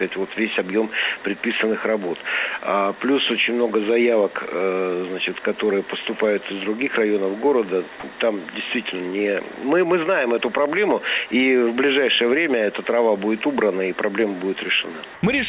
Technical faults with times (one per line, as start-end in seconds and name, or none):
15.14-15.23 comfort noise in place of the background